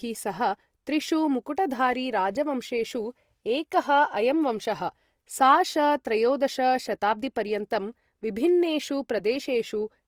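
From start to finish the speech sounds grainy and rough, with a fizzy noise texture sitting on the tonal parts rather than a swirling or watery smear. The bandwidth stays full, with content reaching up to 20.4 kHz, so nothing sounds muffled. The likely cause is Opus compression in its music (CELT) mode, running short of bits in a way that fits a bitrate around 24 kbps. Starved bands are refilled with folded or noise-like content, which produces the graininess.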